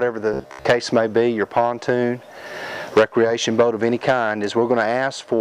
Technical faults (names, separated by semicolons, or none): robotic sound from repeated short buffers